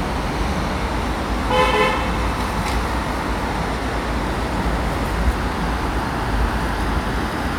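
Nothing stood out on listening to this recording of sounds.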